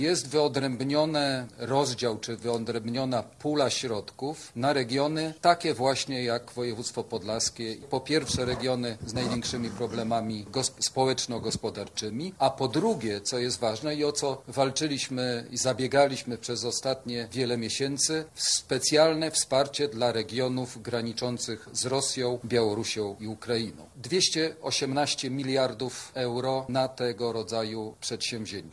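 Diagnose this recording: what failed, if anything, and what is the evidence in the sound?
Nothing in the capture, conversion, processing or playback chain shows a failure audible in the sound.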